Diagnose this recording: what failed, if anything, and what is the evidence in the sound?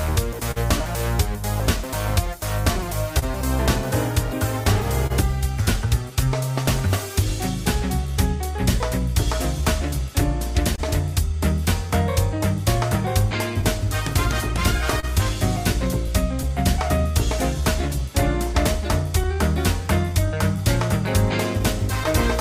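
The network path shows clock drift between sender and receiver. The sender's clock runs slow, by roughly two percent, so the receiver's jitter buffer keeps draining. That sets up the small, unevenly spaced timing hiccups you hear from start to finish.

There are two short stalls from late packets, one at 0.51 to 0.58 s and one at 10.76 to 10.80 s. In each, the buffer ran dry, and the receiver held the last sound for 45 ms and then 22 ms until the packet arrived. Nothing is lost, just a brief drawn-out moment.

From 2.26 to 20.57 s there are repeated timing corrections. The receiver stretches playback to about 99 percent speed, padding in roughly 0.3 s overall through many small repeats. Listen for a slightly unsteady tempo rather than any single obvious glitch.

Scattered short gaps come in three clusters: 2.78 to 5.12 s, 13.61 to 16.46 s and 19.24 to 22.07 s, each with around four of them. 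Lost or late packets got patched by extending the previous sound. The longest are about 30 ms in the first two clusters and shorter near the end, heard as brief ticks or smears.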